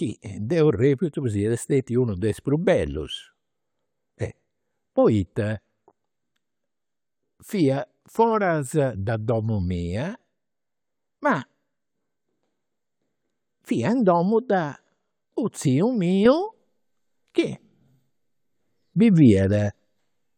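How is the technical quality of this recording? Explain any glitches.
The recording has one glitch, a sudden gain jump. At 16.26 s the speech and background noise step up together by about 7 dB and stay louder until the end. This is likely a digital gain change applied without a ramp. On the waveform the envelope widens abruptly, and on the spectrogram every band brightens at once.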